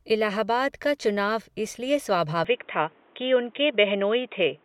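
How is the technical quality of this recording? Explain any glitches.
The recording has one glitch: an input switched to a poorer device, starting at 2.45 s and continuing to the end. The speech abruptly loses everything above about 3.8 kHz and turns dull and boxy, with a faint new background hiss well below the speech. There is no gap at the switch and the level barely changes. The likely cause is the system changing to another microphone or a headset's call profile, which passes a narrower band. A plain filter or bandwidth drop would narrow the sound without adding this different noise floor.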